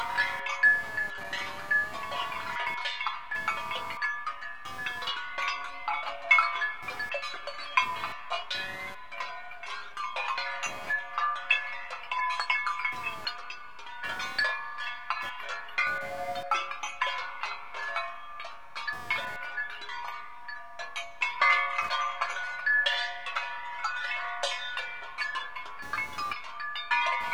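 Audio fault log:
Throughout: computer activity noise, a chirping buzz pulsing around 200 times per second and roughly 20 dB below the sound. Processor or graphics load shifts the shared audio ground. Unlike steady mains hum, it waxes and wanes with computer activity, independent of the sounds.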